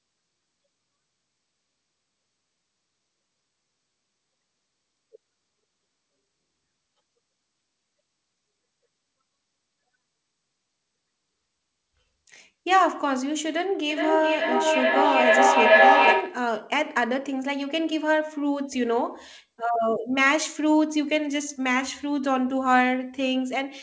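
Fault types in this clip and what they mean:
Feedback echo between two devices: from 13.9 to 16.55 s the speech loops back about every 0.4 s, building to about 8 dB above the speech instead of dying away.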